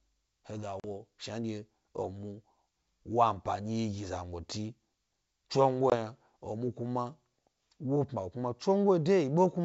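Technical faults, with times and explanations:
0.80–0.85 s and 5.90–5.94 s: packet loss on an ADPCM call. The speech drops into hard-edged silence for about 40 ms, consistent with roughly two packets, then for about 20 ms, roughly one packet. Unlike a plain dropout, the sound resumes slightly distorted, because the decoder's adaptive predictor and step size no longer match the sender's. The wideband G.722 path stays clear, and the error fades within tens of milliseconds.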